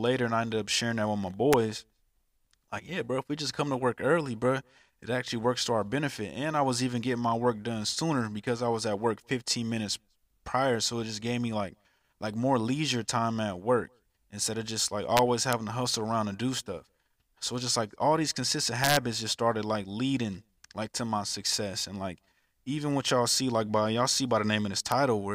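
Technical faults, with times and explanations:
1.53 s, 15.17–15.53 s, 18.84–18.97 s and 24.92 s, integer overflow: loud speech peaks, up to about 3 dB past full scale, wrap to the opposite sign instead of being limited, so each overshooting sample jumps across the whole range and produces sharp, violent cracks harsher than ordinary clipping.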